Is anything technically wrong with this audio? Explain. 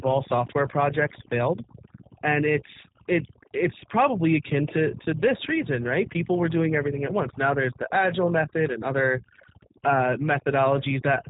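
Yes, there are three problems, and all of them run for the whole clip.

First, mains hum. A steady low tone at 60 Hz sits under everything, fairly loud at roughly 15 dB below the speech, so it's hard to miss. That's the power line leaking into the signal path, most likely through a ground loop or a transformer close to the cabling. It gives the whole recording a constant buzzy floor, with a few low harmonics stacked on the fundamental.

Second, overdone noise removal. The background between phrases drops to an unnatural near-silence, dotted with little twinkling specks where isolated frequency bands pop in and out. The reducer was pushed too hard. It pulls down any band that looks like its noise estimate, and the softer parts of the speech get caught as well.

Third, the G.729 codec. The audio has been through a low-bitrate speech codec, and the character fits G.729A at 8 kbit/s. Nothing gets through above 3.8 kHz, so it's a narrow telephone band with no air on top. 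The damage is plainly audible. The speech is rebuilt from a vocal tract filter, a pitch predictor and a handful of pulses per frame, so it comes out rough and slightly synthetic, and the leftover noise warbles instead of sitting still.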